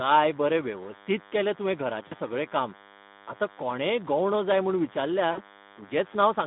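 Right from the start there's a thin, steady buzz sitting under the speech, about 20 dB down. That's DECT cordless phone buzz. A nearby DECT handset or base station fires a short radio burst every 10 ms, and the audio circuitry rectifies it into sound. So you get a 100 Hz fundamental with a whole stack of harmonics, which is why it sounds reedy rather than like a low hum.

Also present for the whole clip is Speex codec damage, and it's plainly audible. The line band runs from about 150 Hz to 3.6 kHz, and the speech has that hoarse, grainy CELP texture that comes from the excitation being starved of bits. The quality fits a Speex mode around 11 kbps, which is a lower setting. There's no real content above the band edge, so the whole thing sounds boxed in as well as rough.

At 2.07 to 2.15 s there's VoIP packet loss concealed by the speech codec. About 40 ms of audio went missing, which fits two lost 20 ms frames. 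The decoder patched the gap by stretching its last pitch and filter into a buzzy tone or coloured noise that fades down, and the speech stays weak or distorted just after the packets return. The same thing happens at 5.31 to 5.40 s, this time over about 60 ms, consistent with three lost frames. That makes the smear longer.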